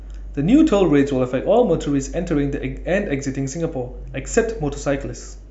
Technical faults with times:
none

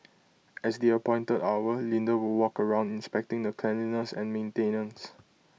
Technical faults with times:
none

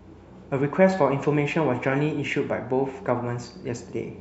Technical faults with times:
none

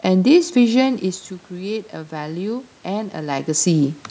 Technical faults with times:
0.83-4.02 automatic gain rising

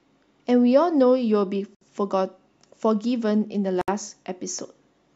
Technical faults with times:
1.75-1.81 gap at a join of encoded pieces
3.81-3.88 gap at a join of encoded pieces

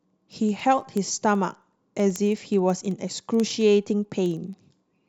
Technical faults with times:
0.11-5.07 word clock ticks

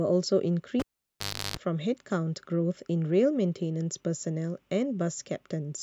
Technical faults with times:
0.79-1.57 cable pulled and plugged in

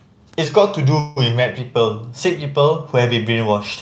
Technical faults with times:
0.45-1.59 drift correction step
0.99-1.18 call audio freeze

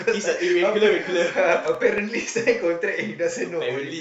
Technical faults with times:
1.74-2.45 CD scratch ticks

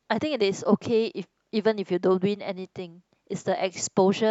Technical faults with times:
none

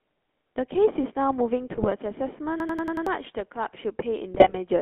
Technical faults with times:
0.00-4.81 GSM full-rate codec
1.74-1.88 GSM bit errors
2.60-3.06 system hang loop
4.34-4.58 GSM bit errors

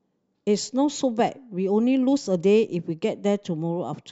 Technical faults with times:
none

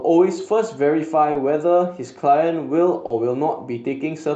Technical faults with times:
1.31-1.36 short concealed packet loss
3.06-3.11 short concealed packet loss

